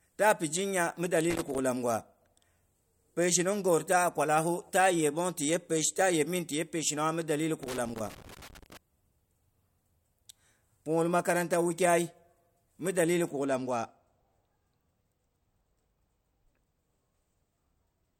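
From 1.30 to 1.58 s and again from 7.63 to 8.77 s, loose connector crackle breaks into the speech: a worn contact rapidly makes and breaks, chopping the signal into irregular scratchy bursts. Unlike digital dropouts, the pattern is ragged rather than evenly spaced clicks or clean gaps.

From 13.29 s to the end, the speech turns dull at the top from channel delay (comb filtering). One channel lags by a tiny fraction of a millisecond, consistent with a two-sample offset. Summed to mono, this cuts a notch near 10 kHz. Unlike a swept flanger or phaser, the notch stays fixed.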